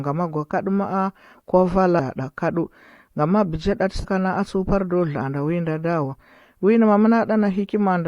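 At 1.98 s and again from 4.03 to 4.05 s the speech hits damaged data in the compressed stream: corrupted frames throw the decoder off, and it briefly loses sync and hunts for the next frame header, leaving a short chirp, click or hole each time.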